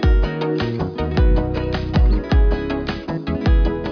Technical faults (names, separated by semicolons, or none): none